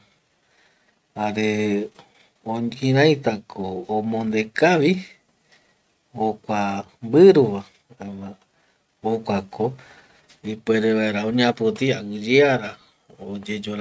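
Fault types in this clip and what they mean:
No technical fault can be heard in the speech signal at any point.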